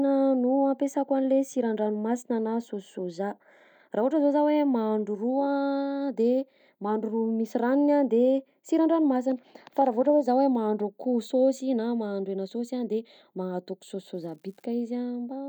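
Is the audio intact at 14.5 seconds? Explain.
No, an unreliable data bit runs from 14.15 to 14.65 s, flipping at random into identical spikes of about -45 dBFS: an even fizz, not clicks of varying size.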